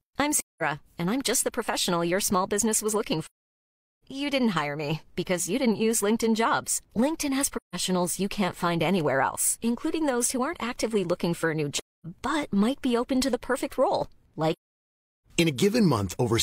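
Soft-edged holes silence the speech at 0.37–0.62, 3.23–4.03, 7.56–7.76, 11.79–12.06 and 14.52–15.25 s, fading out and back in. This is AAC frame loss with muting: lost frames decoded as zeroed spectrum, with the longest gaps, 0.77 s and 0.73 s, fitting runs of roughly 17 or 18 frames.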